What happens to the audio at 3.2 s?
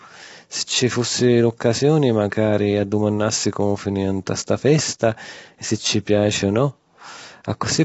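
At 3.2 s the speech is rough and grainy, as throughout, likely from low-delay AAC compression at a low bitrate. A spectrogram shows noise filling gaps between harmonics and nothing above 7.7 kHz.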